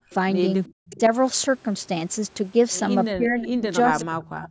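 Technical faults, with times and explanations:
0.00–0.10 s, background gated by the echo canceller: The room sound drops by about 40 dB for roughly a tenth of a second, then returns. The canceller clamped the microphone hard while the loudspeaker was playing, and released it once playback eased.
0.10–0.14 s, 0.67–1.00 s, 3.40–3.48 s and 3.99–4.51 s, echo leak: A copy of the far voice arrives 372 ms late. It starts near 30 dB below the speech and rises to about 15 dB below by the end. The far side's canceller likely let part of its loudspeaker pickup through.
0.85–1.11 s and 3.13–4.39 s, speech suppressed in double talk: The talker's voice dips while the other side speaks, by about 30 dB in the first stretch and about 20 dB in the second. The canceller likely could not separate near speech from echo, so it turned both down.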